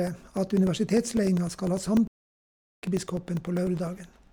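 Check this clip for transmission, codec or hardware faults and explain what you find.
Two hardware-side faults affect this speech clip: a regular train of tiny dropouts throughout, and one long stall near the middle.

From 0.07 s to 4.27 s there are periodic USB or driver dropouts. Every 0.1 s a background task blocks the bus or driver and about 2 ms of audio becomes silence, around forty times. The result is an even ten-per-second ticking, heard only while the sound is present. Its strict spacing separates it from random packet loss.

From 2.07 s to 2.83 s the sound halts for about 0.75 s and then resumes. This is a playback stall, likely the player running out of data or its thread being held up. A single long gap in mid-flow sets it apart from the brief, repeating dropouts.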